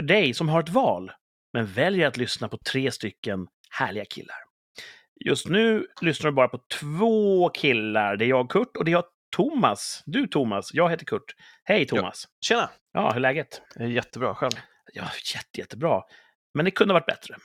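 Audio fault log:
0.26–17.37 s, clock slip clicks: two devices likely running on separate, unsynchronised clocks drift apart by around 70 ppm, so a single sample slips each time. This gives faint, regular ticks through the speech, roughly every third of a second.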